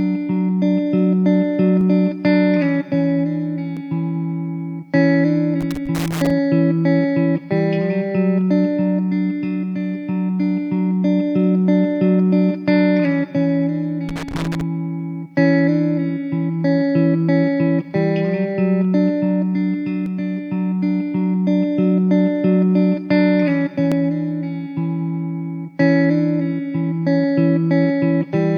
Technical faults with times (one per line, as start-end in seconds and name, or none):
1.81 dropped buffer (overrun)
3.77 dropped buffer (overrun)
5.61-6.30 loose connector crackle
14.09-14.61 loose connector crackle
20.06 dropped buffer (overrun)
23.92 dropped buffer (overrun)